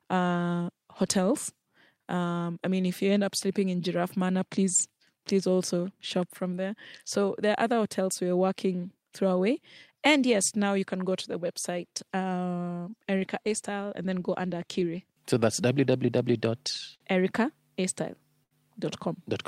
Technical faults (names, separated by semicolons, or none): clock drift between sender and receiver; repeated timing corrections; short stall from a late packet